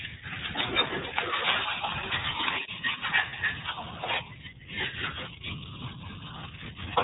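A speech recording has been passed through the iLBC codec, a narrowband VoIP coder that encodes each frame's excitation on its own, without drawing on the previous frame. The damage is plainly audible: nothing above 4 kHz survives, so the voice sounds boxed-in and a little rough and synthetic, and the character fits iLBC's 30 ms, 13.33 kbps mode. There is also one spell of lost iLBC frames, from 3.29 to 3.34 s. A single 30 ms packet appears to have gone missing there, and the decoder covered the hole by repeating the last pitch cycle blended with noise. That comes through as a short held, faintly buzzy vowel where the speech should have continued. Because every iLBC frame stands alone, the voice snaps back to normal almost immediately afterwards.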